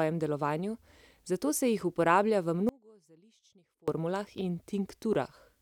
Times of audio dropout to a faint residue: 2.69-3.88

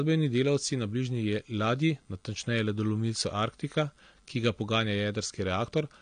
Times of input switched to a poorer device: none

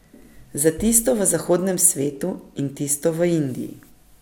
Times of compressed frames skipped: none

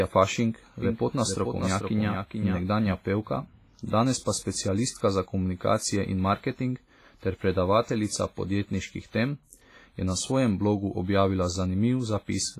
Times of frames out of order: none

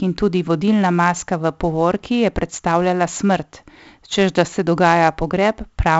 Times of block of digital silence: none

